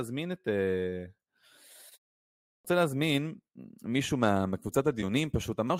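A short speech recording with a clipped start after a pause at 2.47 s. After a 0.58 s silence, the output device apparently sleeps and wakes late, swallowing about 176 ms of onset. The waveform jumps abruptly from flat silence into speech already underway, and the spectrogram lacks the word's initial energy.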